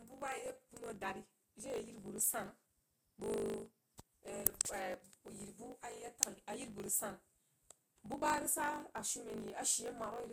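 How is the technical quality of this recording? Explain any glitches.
The quality is compromised by one fault running through the whole speech clip. A block size mismatch (truncated) drops each block's tail, which fits 1024-sample blocks, producing a 50 Hz buzz and speech about 1.07 times faster at normal pitch. Spectrograms show vertical lines every 20 ms, and the waveform shows regular jumps.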